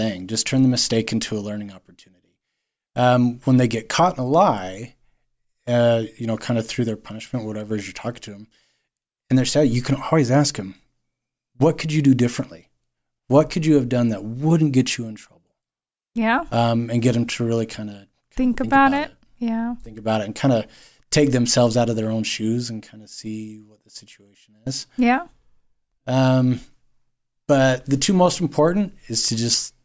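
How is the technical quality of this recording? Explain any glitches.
No glitches can be heard anywhere in this speech recording. There is nothing in it that calls for a technical explanation.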